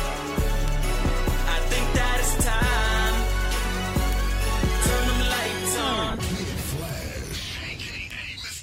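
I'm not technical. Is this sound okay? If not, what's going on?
No, not quite. A bit error spike happens four times: one or a few digital values get corrupted for an instant, then snap back. Each one is a sharp tick, unrelated to the sound itself, at 0.68, 4.13, 6.89 and 8.11 seconds. The one at 4.13 is loudest, and 8.11 is faintest.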